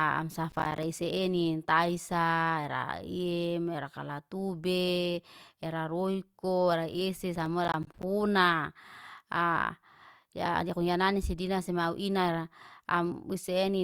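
Processor overload crackle hits from 0.52 to 0.83 s and again from 7.36 to 8.03 s, after "era roiko era isi". Roughly 10 ms buffers miss deadlines and drop to silence, producing gritty crackle.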